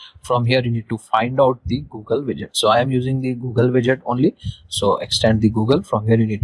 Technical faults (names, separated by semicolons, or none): none